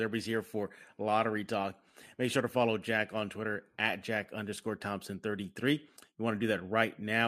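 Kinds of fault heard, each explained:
No audible technical fault turns up anywhere in the speech signal, so there is nothing to list or explain.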